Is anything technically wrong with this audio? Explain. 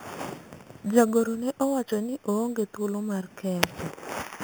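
Yes. Throughout the speech there is imaging from sample-and-hold upsampling. Each sample was repeated without smoothing, which fits 8 kHz audio raised to 44.1 kHz. That leaves a mirrored spectrum copy at 4 to 8 kHz, about 17 dB down. It is heard as a metallic fizz that follows the speech level and moves opposite to its pitch, unlike steady hiss.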